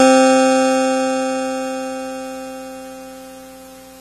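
A low-bitrate encode that was likely later saved again as a high-bitrate MP3 sits behind this music clip: low-bitrate audio saved at a high bitrate. Throughout, nothing is present above 13.9 kHz, and the artefacts of the first encoding remain, pointing to an AAC source at around 32 kbit/s. The later MP3 pass, near 256 kbit/s, makes the file larger but cannot restore the missing top end or clean up those earlier losses.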